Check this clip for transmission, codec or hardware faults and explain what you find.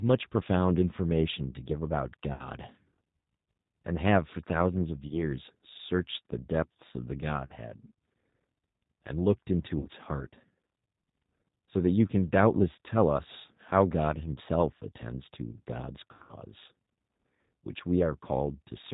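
Two faults are audible: low-bitrate codec coloration across the whole recording, and six short dropouts that have been patched over by the decoder.

G.729 codec: Throughout, the speech sounds slightly rough and synthetic, with plainly audible coloration and nothing above 4 kHz. That points to G.729A at 8 kbit/s. The codec doesn't send the waveform itself. It sends a vocal tract filter, a pitch predictor and a handful of pulses every 10 ms, and the decoder rebuilds an approximation of the voice from those.

VoIP packet loss concealed by the speech codec: At 2.33–2.45 s, 5.08–5.15 s, 7.46–7.57 s, 9.79–9.87 s, 14.35–14.38 s and 16.13–16.36 s, the speech is stretched into a buzzy tone or coloured noise that fades out and then recovers weakly. The missing audio was 60, 20, 40, 60 and 20 ms in the first five. The last spans 160 ms with 140 ms missing in scattered gaps, the longest a continuous 80 ms. 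Each pattern fits whole 20 ms packets going astray. The decoder filled each gap by repeating its last pitch and filter at falling gain. Because every frame depends on the previous one, the voice stays thin for a moment after audio returns.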